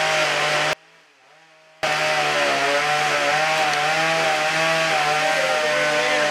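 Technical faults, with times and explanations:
0.73–1.83 s, audio dropout to a faint residue: for about 1.1 s the sound cuts abruptly to a faint leak roughly 30 dB below its normal level, then snaps back. The likely cause is a brief loss of the wanted signal while the downstream path stayed live.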